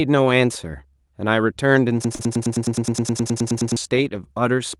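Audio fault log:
2.05–3.77 s, broken-record loop: a 105 ms slice plays 16 times back to back, likely a stalled stream resending its last fragment, so the real audio there is lost.
2.15–2.22 s, short concealed packet loss: 40 ms never arrived, and the decoder stretched the preceding sound to cover it before blending back, leaving a quick smear.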